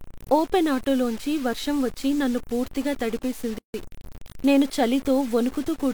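Throughout the speech, a grainy distortion rides on the signal, roughly 20 dB below it, likely from truncation to about 6 bits without dither; unlike steady hiss, the grit tracks the voice. From 3.58 to 3.74 s, a gap at a join of encoded pieces opens a 156 ms gap with smeared edges, so the silent part is shorter, and the speech resumes exactly where it paused rather than skipping ahead.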